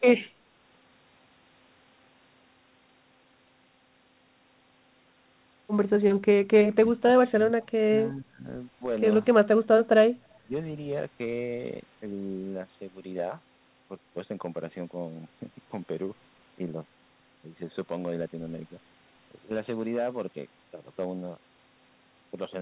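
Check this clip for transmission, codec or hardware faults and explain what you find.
Two faults stand out: hard clipping across the whole speech clip, and two dips that point to suppression in double talk. The sound stops sharply at 4 kHz, which fits a narrowband G.711 A-law telephone codec on the call path.

Hard clipping runs throughout. A stage in the chain is being driven about 5 dB past its ceiling, so the loudest peaks are sheared flat. Only a small fraction of samples are affected, and the flattened tops add high harmonics heard as brief crackle on louder syllables.

Speech suppressed in double talk appears from 6.85 to 8.45 s and again from 10.45 to 10.51 s. The likely cause is an echo canceller that mistook the talker for loudspeaker echo while both sides spoke and turned the signal down. The result is a deep dropout, roughly 25 dB, lasting about a second across the first span, and a short dip of around 20 dB in the second.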